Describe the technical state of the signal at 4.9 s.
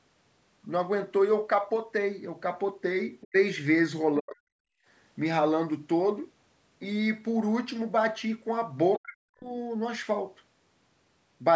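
Right around there you've got background gated by the echo canceller, running from 4.79 to 4.86 s, so it's just wrapping up by 4.9 s. While the far-end loudspeaker was playing, the canceller clamped down on the microphone, pulling the room sound down by about 23 dB at its deepest. You hear the ambience briefly sink or vanish for roughly 70 ms, then pop back as the canceller releases its grip.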